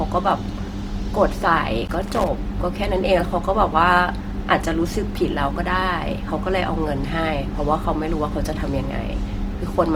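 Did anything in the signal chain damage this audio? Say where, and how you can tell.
Yes. At the codec stage, the speech sounds grainy and rough throughout, likely from Opus compression in its music mode at a rate near 24 kbps. A spectrogram shows noise-filled bands reaching about 20.2 kHz.

In the analogue wiring, loose connector crackle appears from 1.87 to 2.28 s as a contact makes and breaks. The waveform shows irregular spikes and chopped dropouts there.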